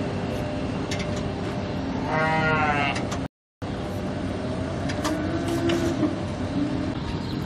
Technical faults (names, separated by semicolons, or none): rebuffering stall